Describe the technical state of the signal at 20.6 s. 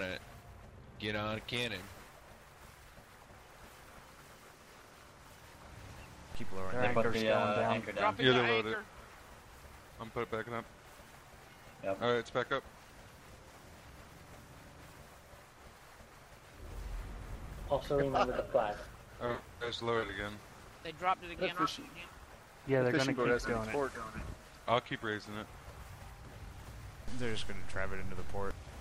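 A brief garbled stutter runs from 20.52 to 20.6 s, where the sound seems to jump back on itself for an instant. This is chunks out of order. One 20 ms block arrived late and plays three blocks after its proper place, so nothing is missing but the sequence is scrambled. Each of the three hard joins between misplaced blocks leaves a waveform discontinuity.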